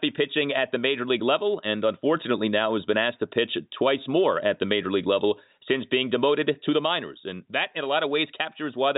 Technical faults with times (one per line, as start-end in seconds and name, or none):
none